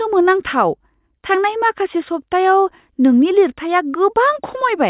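No faults detected anywhere in the speech recording.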